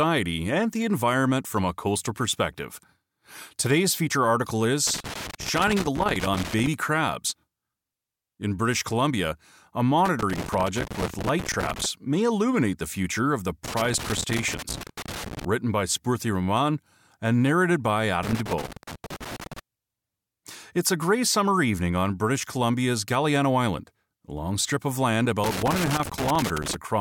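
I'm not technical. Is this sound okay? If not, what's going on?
No. Something in the signal path has a loose connector crackle: a worn or dirty plug or socket keeps losing and regaining contact, so the sound gets chopped up. You hear it as bursts of scratchy crackling, from 4.87 to 6.67 s just after "feature article", 10.06 to 11.85 s, 13.65 to 15.45 s, 18.23 to 19.59 s after "and narrated by", and 25.44 to 26.75 s after "long strip of land".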